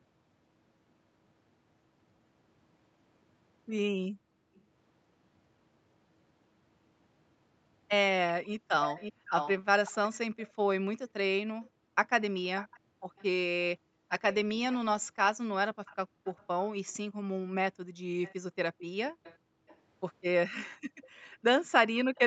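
Background gated by the echo canceller first appears at 4.1 to 4.63 s. While the far side played through a loudspeaker, the echo canceller clamped the microphone hard, so the room sound sinks by up to about 37 dB and returns once the suppression releases. It recurs at 9.13 to 9.27 s (about 27 dB), at 11.7 to 14.1 s (about 39 dB, roughly a second of dips in all), at 16.15 to 16.19 s (about 35 dB) and at 17.92 to 21.43 s (about 39 dB, again around a second in total).

Echo leak is heard at 4.55 to 4.61 s as a faint scrap repeating the sound 382 ms late, about 35 dB under the speech. From 8.44 s to 22.19 s a much stronger copy runs 542 ms behind, only about 10 dB down, so a trailing double of the talker sits under almost the whole second half. The likely cause is a loudspeaker endpoint whose echo canceller let part of its microphone pickup through and sent it back.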